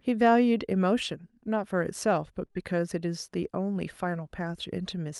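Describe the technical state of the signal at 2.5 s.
A short stall from a late packet runs from 2.45 to 2.51 s. A packet arrived behind schedule, the jitter buffer ran dry, and the receiver held the last bit of speech for about 37 ms until the data turned up, then resumed from the same point. Nothing is skipped, but that sound lingers too long, with a faint buzzy or slightly dipped quality and a small added delay of the same length.

Short concealed packet loss follows immediately, from 2.51 to 2.57 s. About 40 ms of the call never reached the decoder, so the receiver invented roughly 39 ms to fill the gap, extending the preceding sound from its pitch or as shaped noise, then crossfading back into real audio. It comes across as a brief smear or wobble, and a short consonant in that stretch can drop out. Around both events the call codec's top end stops near 12 kHz, which fits Opus in super-wideband mode.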